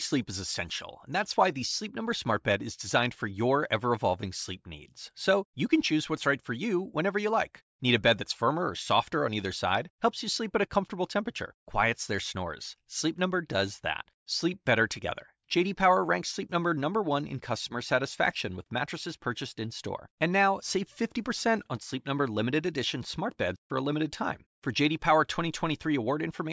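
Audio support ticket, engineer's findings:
No faults found on the speech clip. Nothing to attribute to any component in the chain.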